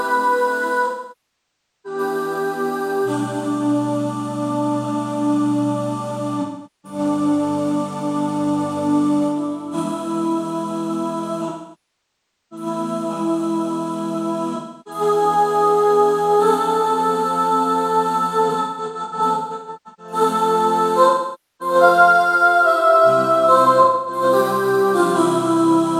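AAC frame loss with concealment at 0.86–1.99, 6.41–6.99, 11.49–12.66, 14.56–15.01, 18.49–20.13 (scattered, short bursts), 21.09–21.75 and 23.82–24.22 s: lost audio is filled from earlier spectra, giving smeared, noisy patches rather than the abrupt silence of a plain dropout.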